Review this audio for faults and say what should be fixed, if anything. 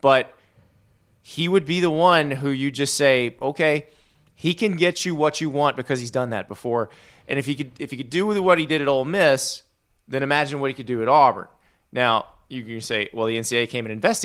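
Nothing here needs fixing. The Opus voice compression keeps the full audio band, and its light coding traces on the speech point to hybrid mode at around 24 kbps.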